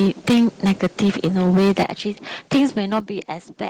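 The microphone's input level was likely set too high for this speech clip, so from 0.0 to 1.84 s its peaks overrun the converter by about 14 dB, and a large share of the waveform has its tops sheared off. The loud syllables turn harsh and crackly, and it happens again, more mildly (about 7 dB over, far fewer peaks flattened), from 2.54 to 2.99 s. This microphone overload likely triggers the call software's gain control, so the microphone volume is stepped down at 1.83 s by about 9 dB and at 3.0 s by about 8 dB. Each time, voice and background drop in level together, right at the end of the distorted stretch.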